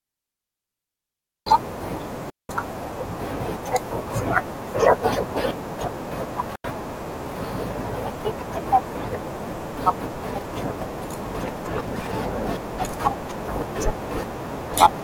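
Speech that drops into clean near-silent holes at 2.30 to 2.49 s and 6.56 to 6.64 s, with no noise around them: digital wireless dropout, the receiver muting when link data is lost.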